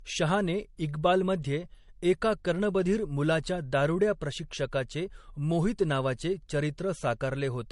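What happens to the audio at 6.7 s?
At 6.7 s the speech has the same dull, smeary quality as everywhere else, with nothing above 11.2 kHz, likely from transcoding between lossy codecs, HE-AAC into MP3, stacking their artefacts.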